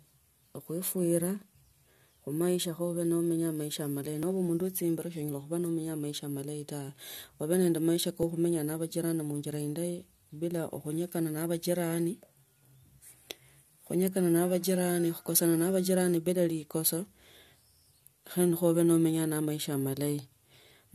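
At 4.23 s and again at 8.23 s the speech jumps, the sign of an overlap between stream segments. Each time, the player trimmed a stretch it took to be duplicated where two segments met, removing about 6 ms and then 8 ms of real audio. The 4-second spacing fits segment boundaries. A waveform shows an abrupt step discontinuity, and a spectrogram shows a thin vertical broadband line at each point.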